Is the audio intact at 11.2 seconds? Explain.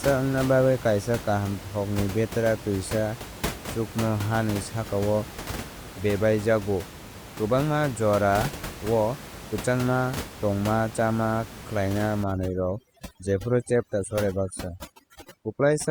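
Yes, the audio is intact at 11.2 seconds, with only the room's own background noise sitting about 13 dB below the speech, as part of the recording rather than a fault.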